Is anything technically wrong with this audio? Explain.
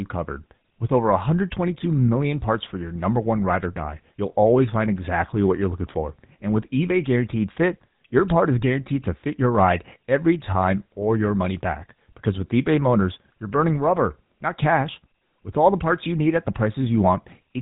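Yes. Throughout the speech there is a buzzy, gravelly roughness, with nothing above about 3.8 kHz, which is GSM full-rate codec damage consistent with 13 kbps: it models the vocal tract and excites it with sparse, regularly spaced pulses, discarding fine detail.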